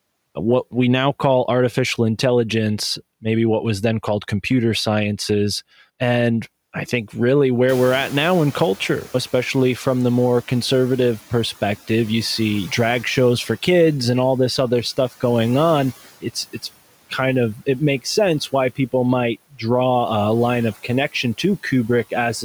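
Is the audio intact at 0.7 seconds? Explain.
Yes, the audio is intact at 0.7 seconds, with no fault present at that moment.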